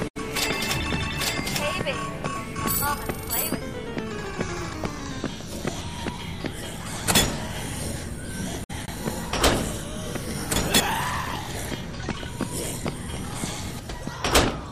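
A brief jumbled stutter occurs at 8.64 to 8.88 s and again at 10.56 to 10.8 s. Both are chunks out of order: a 60 ms chunk arrived three chunks late and played after its successors, scrambling the sequence and leaving three hard joins.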